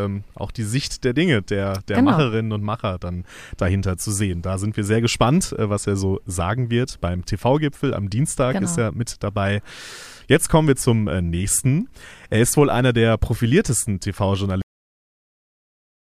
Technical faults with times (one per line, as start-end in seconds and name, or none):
14.62-16.14 cut-off end